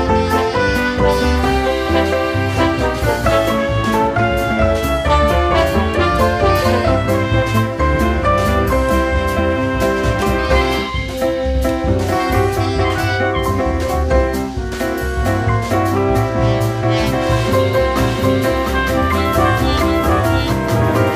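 From 17.97 s to the end, every sound is followed by a second, equally loud copy trailing by roughly seven tenths of a second. The echo carries the full frequency range with no fade or room colour, and it appears abruptly rather than building up. This is a doubled audio track, likely caused by the same signal reaching the mix twice, once through a slower path that lags behind the original.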